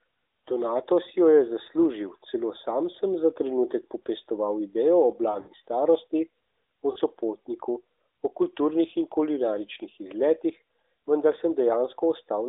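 Lost AMR speech frames break up the speech at 5.32–5.52 s, just after "trenutek popestoval idejo o", and at 6.92–6.99 s, just before "sopotniku o kulturnih in". The decoder reuses the last good frame's settings with falling gain. The first hit, scattered over 160 ms, is a smeared warble. The second is a brief dip. Unlike a hard VoIP dropout, neither gap cuts cleanly to silence.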